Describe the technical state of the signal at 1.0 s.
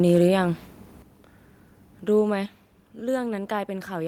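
Right around 1.02 s there's a microphone volume stepped down event: the whole speech signal, voice and background together, drops by about 7 dB in a single step and stays there. It sounds like someone suddenly turned the mic down. The likely cause is the call software deciding the input was running hot or clipping and pulling the device's input volume down in one hit rather than easing it.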